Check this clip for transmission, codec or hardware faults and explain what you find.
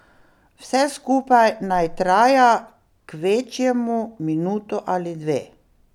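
I found no transmission, codec or hardware faults in this clip.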